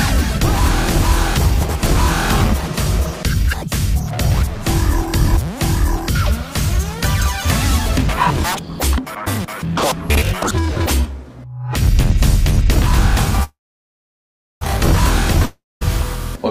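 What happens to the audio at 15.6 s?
At 15.6 s the audio sits inside a long network dropout, from 15.45 to 15.83 s. The last sound is stretched into a fading buzz, then about 0.2 s of near silence follows. Playback resumes with 0.36 s missing, likely from lost packets.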